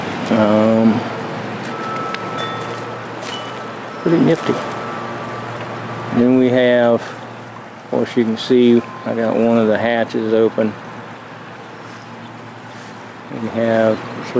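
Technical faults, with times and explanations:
Throughout: gain pumping. The gain drops by about 10 dB under each loud sound, so quiet and loud passages sit unnaturally close in level and the sound feels squashed and breathing. The likely cause is gain set far too high, with a fast limiter clamping down on each peak. On a waveform the envelope looks flattened. On a spectrogram the content sits beneath the 8 kHz ceiling left by the wideband call path.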